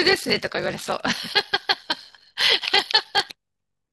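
A steady buzz near 46.9 Hz runs under the speech throughout, with delivery slowed to 0.861 times normal at roughly normal pitch: block size mismatch (padded), short blocks zero-filled to what fits a 1024-sample read size.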